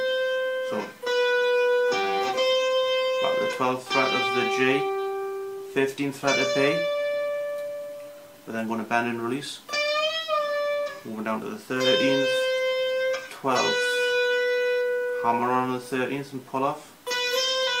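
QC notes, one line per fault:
No faults heard anywhere in this clip.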